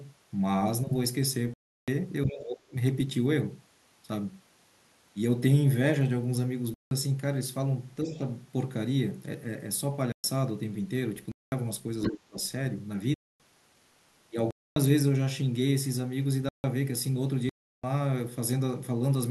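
The speech drops abruptly into dead silence at 1.54 s for 0.34 s. These are blocks of digital silence, likely because the output buffer went unfilled and was zeroed, and the 0.34 s length fits a 16384-sample buffer at 48 kHz. From 2.26 to 2.75 s the talker's voice sinks by about 30 dB, likely speech suppressed in double talk, as the echo canceller turns everything down while both sides speak. Another silent block opens at 6.74 s for 0.17 s. Around 8.04 s a slight dip of about 5 dB coincides with faint traces of a second voice, roughly 25 dB below the speech, from 8.05 to 8.19 s, likely the other side's voice leaking through from an uncancelled loudspeaker. Silent gaps follow at 10.12 s (0.12 s) and 11.32 s (0.20 s). At 12.02 s the leaking voice returns nearly as loud as the talker, about 5 dB under, and from 12.12 to 12.37 s the talker is cut by about 25 dB. The remaining silences fall at 13.14 and 14.51 s (0.26 s each), 16.49 s (0.15 s) and 17.49 s (0.34 s).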